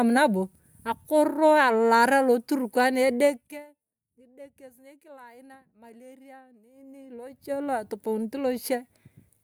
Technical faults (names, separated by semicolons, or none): zipper noise